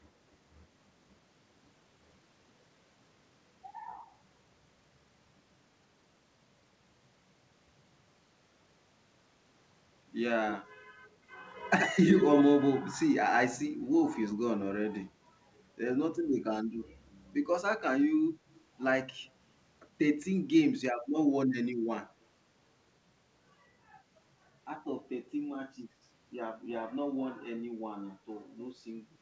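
From 11.79 to 12.43 s the speech is followed by a delayed copy of itself, trailing by 76 ms and roughly as loud as the original, so the two blur into a doubled, smeared sound. This is an echo leak, likely from a far end playing the call over a loudspeaker whose echo canceller failed to remove what its microphone picked up and sent it back. The band-limited call audio, with nothing above 8 kHz, fits a G.722 wideband codec.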